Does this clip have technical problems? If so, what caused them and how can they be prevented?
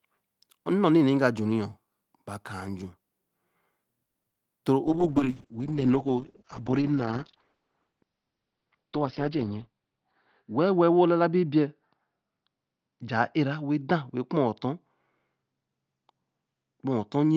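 Yes. Repeated packet loss (robotic sound) runs from 4.05 to 4.38 s: four gaps in quick succession, the longest 90 ms. The receiver patched 140 ms by stretching the previous sound and left 60 ms missing, so 43% of that stretch is concealment and comes out choppy, with pieces missing. A more stable network path, or forward error correction, would prevent it.

A call bitrate drop starts at 4.87 s and lasts to the end. The encoder fell from 32 to 8 kbps and stayed at the lowest rate for 4.44 s. Audio bandwidth narrowed from 20 kHz to 6 kHz, so the sound turns muffled and coarse. Reserving enough bandwidth for the call, or keeping the connection uncongested, would prevent the drop.

A jitter buffer speed-up runs from 8.96 to 9.75 s. The receiver held too much delayed audio and trimmed about a tenth of a second by cutting short pitch-period pieces. Playback runs at 110% speed with unchanged pitch and sounds hurried. 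Steadier packet delivery, so packets don't arrive in bursts, would prevent it.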